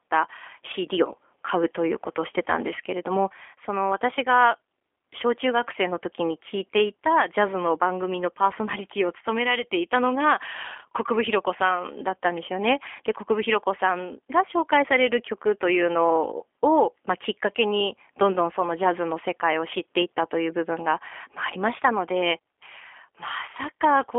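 From start to finish the speech carries G.729 codec damage, plainly audible, with nothing above 3.5 kHz and a narrow telephone band of roughly 300 Hz to 3.4 kHz. The rough, slightly synthetic texture, which fits the 8 kbit/s G.729A variant, comes from each 10 ms frame being rebuilt from a vocal tract filter, a pitch predictor and a few pulses. Simple band-limiting would only dull the sound; this adds a buzzy roughness to the voice.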